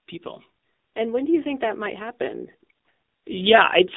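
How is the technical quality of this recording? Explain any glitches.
The speech sounds muffled, boxed-in and buzzy for the whole clip, the unmistakable character of a narrowband phone call.

AMR narrowband mobile codec, throughout: the voice occupies only about 200 Hz to 3.7 kHz, with nothing above 3.8 kHz, so sibilants and airiness are gone. The codec rebuilds speech from a vocal-tract model excited by sparse pulses, and at this quality the damage is plainly audible as a synthetic, buzzy edge, which fits a low bitrate around 7.4 kbps. The call's microphone processing upstream contributes only its normal trimming of the deepest bass.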